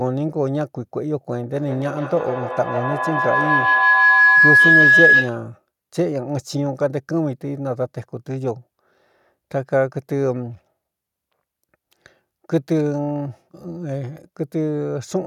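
From 1.53 s to 5.48 s a feedback howl builds over the speech. Two devices in the same room are on the call, so sound leaves one loudspeaker, re-enters a microphone and returns louder on each pass. The repeats narrow to a tone around 1.5 kHz, with the loop's round-trip delay roughly 150 ms. It peaks about 8 dB above the speech before it stops at 5.48 s.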